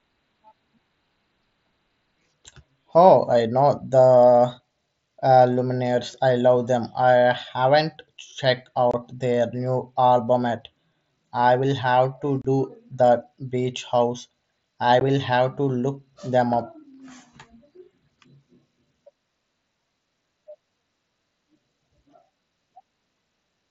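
Unconcealed Bluetooth headset packet loss: voice packets between headset and phone went missing and nothing filled in for them, so the speech cuts to abrupt silent holes at 8.91–8.94 s (about 23 ms), 12.42–12.45 s (30 ms) and 15.00 s (15 ms).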